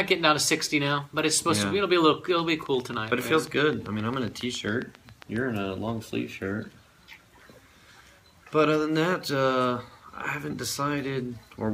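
From 2.39 to 5.37 s a train of clicks runs over the sound: about twenty near-identical pulses at a steady 7.4 per second, heard as an even ticking that carries through quiet moments too. The peaks stand a few decibels above the surrounding audio. On a waveform they show as evenly spaced sharp spikes; a spectrogram shows thin vertical broadband lines. The regular pattern likely points to interference from nearby equipment or a faulty connection or power supply.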